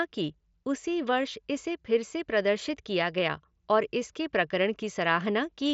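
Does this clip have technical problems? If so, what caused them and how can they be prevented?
No, the clip has no technical problems, so there is nothing that needs preventing.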